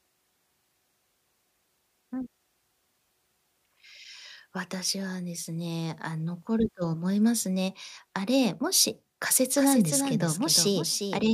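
From 9.57 s to the end, a doubled audio track appears: a second copy follows roughly 0.4 s behind, about 5 dB quieter, likely from a slower capture path.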